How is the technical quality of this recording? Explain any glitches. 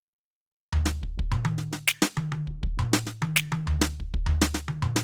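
The recording carries audible Opus compression from start to finish. The music sounds grainy and rough. Tones lose their clean edges and take on a noisy texture, yet little of the watery swirl of MP3 comes through. The top end still reaches about 20.2 kHz. The likely cause is Opus in its music mode at a low bitrate, around 24 kbps. Short of bits, the encoder keeps each band's energy but refills detail by folding lower bands or adding noise.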